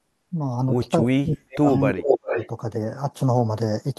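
From 1.03 to 1.69 s the speech dips hard, by around 30 dB at its deepest, with roughly 0.4 s of the span affected. This is speech suppressed in double talk, likely from an echo canceller that heard both ends at once, could not tell its own talker from loudspeaker echo, and attenuated everything. Overlapping it, from 1.35 to 1.81 s, a delayed copy of the speech arrives 382 ms late and about 15 dB below the direct signal. This is echo leak, likely from a loudspeaker end whose canceller left part of the microphone pickup in the outgoing signal.

The pattern repeats. Between 1.9 and 2.39 s the speech is pulled down again, by about 25 dB, over roughly half a second, which is again speech suppressed in double talk, likely from the same canceller reacting to simultaneous talk. From 2.0 to 2.48 s the echo leak returns, still 382 ms behind the speech but now roughly as loud as it. This is likely the same residual coupling at the loudspeaker end, this time passing through with almost no reduction.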